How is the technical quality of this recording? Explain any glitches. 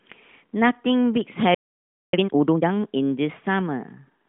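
The recording has one interruption followed by a rushed recovery, heard over narrowband mobile-codec speech with nothing above about 3.5 kHz.

From 1.54 to 2.13 s there is a playback stall. The player most likely ran dry of buffered data, so output drops to silence for about 0.59 s before resuming.

From 2.13 to 2.71 s comes a time-compressed catch-up. The player trims its backlog by cutting and cross-fading small segments, so the speech runs at twice normal speed with unchanged pitch.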